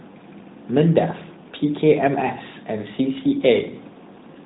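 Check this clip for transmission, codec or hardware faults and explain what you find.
Nothing stood out on listening that would point to a transmission, codec or hardware fault in this speech.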